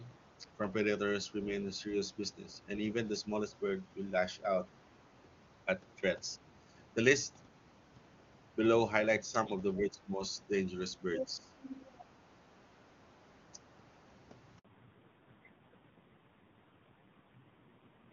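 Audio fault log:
9.78–10.22 s and 11.19–11.55 s, speech suppressed in double talk: the talker's level sinks, by roughly 15 dB in the first stretch and nearly 20 dB in the second, thinning and partly breaking up. Both ends were likely talking at once, so the echo canceller turned everything down.
11.14–11.26 s and 11.54–12.05 s, other side's voice leaking through: a second voice pokes through, the first scrap strong, only a few dB below the talker, the later one much fainter. Loudspeaker sound was likely not fully cancelled from the microphone.
14.59 s, handover gap: the sound drops out abruptly for 60 ms, then resumes. The call switched networks and no speech frames arrived during the changeover, so that moment is simply missing rather than muffled.
14.65 s to the end, fallback to narrowband: from here the sound turns dull and rough, with nothing above 4 kHz; before it, the wideband HD Voice stretch at 23.85 kbit/s carries clear high end. 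The call dropped to AMR-NB at 5.9 kbit/s.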